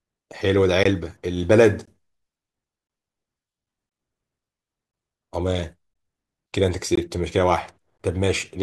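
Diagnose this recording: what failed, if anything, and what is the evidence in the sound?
The speech is broken by a gap between chunks at the playback or streaming stage. Short silent holes of 20 ms start at 0.84, 1.86, 2.88, 3.90, 4.92, 5.94, 6.96 and 7.98 s, spaced 1.02 s apart. That fits 1.0 s chunks each followed by inserted silence, with the audio pushed later rather than lost. On a waveform, each hole is a flat line with hard edges. On a spectrogram, it is a thin vertical blank stripe across all frequencies.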